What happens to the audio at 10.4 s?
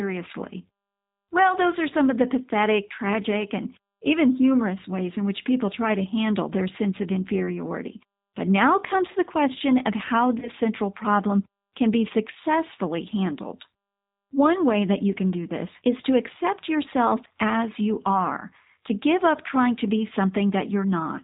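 At 10.39 to 10.49 s, between "the question of how" and "central problem can be", there is VoIP packet loss concealed by the speech codec. About 30 ms of audio went missing, consistent with a single lost packet. The G.729 decoder fills the gap by extending its last pitch and vocal tract filter at falling gain, which produces a brief buzzy tone or coloured noise that fades. The sound then stays weak or distorted for tens of milliseconds as the decoder recovers.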